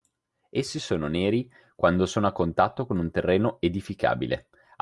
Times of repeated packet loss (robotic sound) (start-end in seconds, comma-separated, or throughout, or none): none